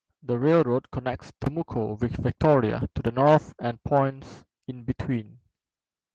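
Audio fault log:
Nothing stood out on listening to this speech clip.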